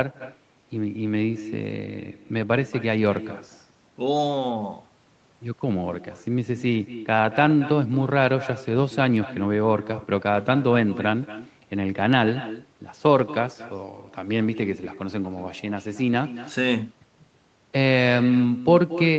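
Echo with no canceller runs through the whole clip: every phrase is trailed, about a fifth of a second later, by a quieter copy roughly 14 dB below the direct speech. The far end is playing the call over a loudspeaker, its microphone picks that sound back up, and nothing subtracts it before it returns across the network. The copy sounds thin, and it is band-limited like the main signal, with nothing above 8 kHz.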